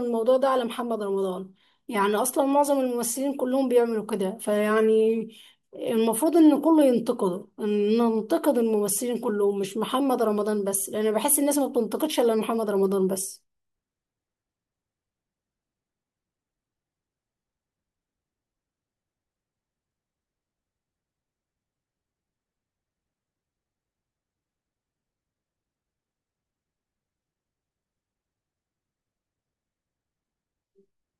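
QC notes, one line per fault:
No faults found in this speech recording on listening.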